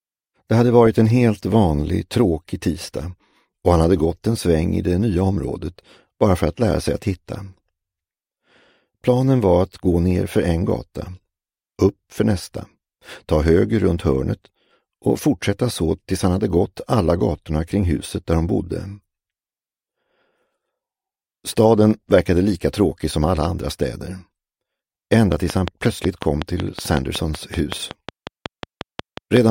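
Something, likely interference from nearby equipment or a faulty connection, injects a regular pulse from 25.13 to 29.38 s, about 5.4 times a second. The result is a steady train of clicks, roughly twenty alike pops standing about 15 dB above the sound and ticking through pauses too.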